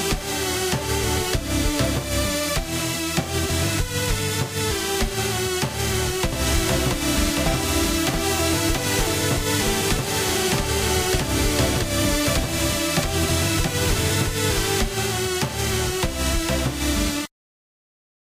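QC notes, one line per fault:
6.33–14.81 s: doubled audio track; a dry full-band copy trails about 0.7 s behind, roughly 5 dB down, likely from a second capture path or misaligned edit.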